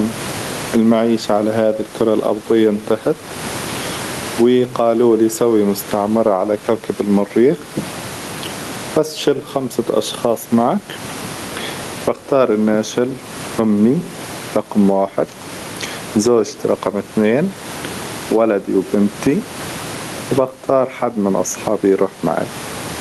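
A speech recording with gain pumping throughout. The room background sits roughly 29 dB below the speech, and the gain swings by around 20 dB. The likely cause is input gain set far too high, with a fast limiter or compressor clamping each peak and then releasing. The high frequencies stop near 12 kHz, which points to a super-wideband Opus call codec in the path.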